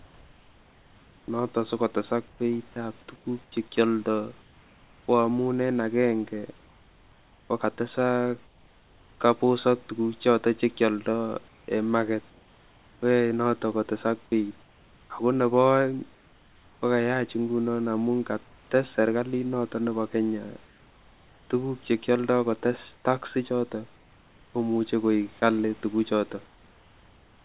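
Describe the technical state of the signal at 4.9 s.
At 4.9 s the speech sits in a stretch of sound chopped by the voice detector, from 0.0 to 5.08 s. About 2.3 s of quiet syllables and word edges become comfort noise, likely from the sender's detector toggling transmission, so the speech sounds choppy.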